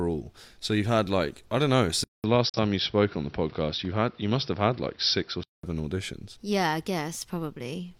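Input switched to a poorer device, at 2.04 s, right after "like I don't know", and lasting until 5.63 s. A 200 ms silence marks the change. Then the speech turns duller, with nothing above 5.8 kHz, at about the same loudness, over a new noise floor about 35 dB down. This is likely the recording moving to a lower-quality microphone or a headset's call profile.

Digital broadcast dropout, from 2.49 to 2.59 s, inside that duller stretch. The receiver stopped getting usable data and muted, with a 3 ms fade into and out of the hole. That gap points to a single lost frame, about 43 ms of programme that is gone rather than delayed.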